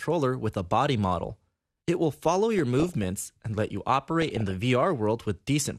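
DAB burbling appears from 2.59 to 3.04 s, then from 4.22 to 4.53 s. Weak reception let bit errors through, under one percent, into the MP2 data. Wrong samples put short blips of noise into single sub-bands.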